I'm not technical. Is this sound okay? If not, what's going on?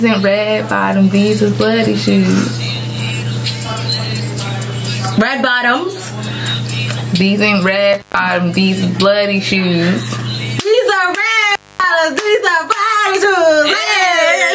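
No. Gain pumping runs throughout: loud and soft parts end up closer in level and the sound is squashed, likely from a fast limiter fighting a level set far too high.

Intermittent contact at 7.93 to 8.19 s and 11.51 to 11.84 s: a loose plug or cable briefly opens, cutting the sound for about 0.13 s and 0.24 s, with crackles at each edge.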